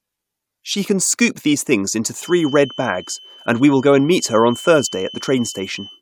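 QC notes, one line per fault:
2.15 s to the end at 6.01 s, feedback whistle: right after "scoop these things into" a thin, steady tone at 3 kHz comes in under the speech and just sits there, roughly 20 dB down, wobbling a bit in level but never building up. That's what you'd get if a speaker-to-mic loop were likely hovering right on the edge of feedback, so one frequency keeps ringing without tipping into a full howl.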